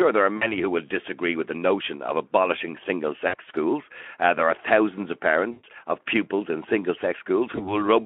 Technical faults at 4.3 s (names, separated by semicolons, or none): none